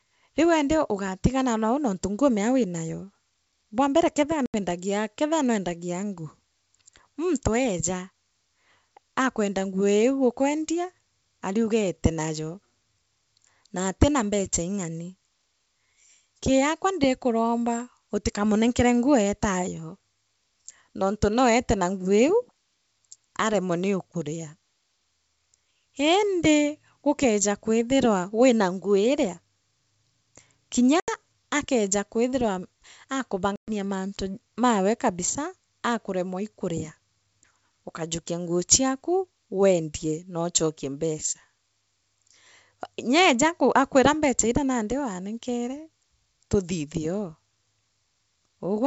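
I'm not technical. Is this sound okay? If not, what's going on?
No. There's packet loss on an ADPCM call: brief holes of silence at 4.46 to 4.57 s (after "bwambere kethia"), 31.00 to 31.10 s (before "akeeja kwithirwa") and 33.56 to 33.71 s (before "mantu mawe kabisa akanemwa"). The decoder then briefly loses track, so the speech can come back with a click or at the wrong level.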